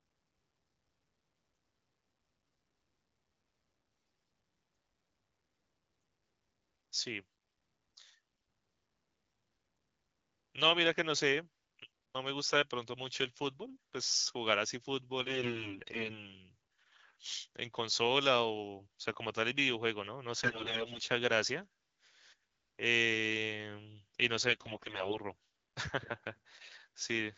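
AMR bit errors hit at 3.97–4.31 s, 15.20–16.33 s, 20.43–21.00 s and 24.48–25.18 s, worst in the first and third. Corrupted pitch, gain and pulse data turn the speech hoarse and gargly. Unlike packet loss, nothing drops out, and pitch and level hold.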